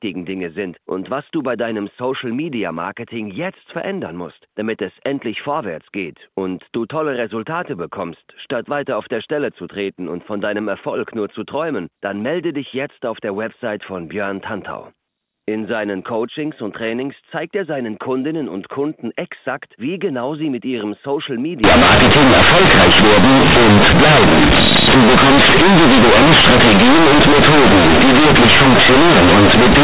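Companded audio read as linear starts at 21.64 s and lasts to the end at 29.84 s. A-law telephone bytes are played as plain 8-bit samples with no expansion, so sign changes swing hugely, quiet speech becomes as large as loud speech, the sound turns to very loud buzzing distortion, and pauses fill with strong noise.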